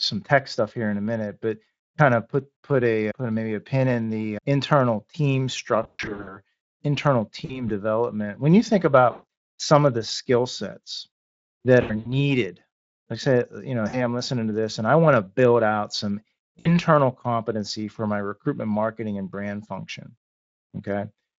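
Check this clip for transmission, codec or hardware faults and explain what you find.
The clip shows VoIP packet loss concealed by the speech codec, at six points. They fall at 5.83–6.39 s after "in the internal team", 7.45–7.69 s, 9.11–9.23 s between "you think" and "some of the skill", 11.81–12.14 s, 13.89–14.02 s, and 16.60–16.73 s between "to build out some" and "competency for my recruitment". The decoder fills missing packets by repeating its last pitch and filter at falling gain. The sound smears into a buzzy, fading tone and stays weak briefly after packets return. The first burst is the longest, with gaps of up to 120 ms.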